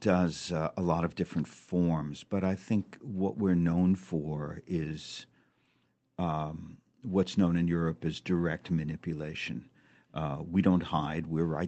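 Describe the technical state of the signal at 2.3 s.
At 2.3 s the speech is intact, carrying only the ordinary coding character of the call path, whose audio extends up to about 8 kHz.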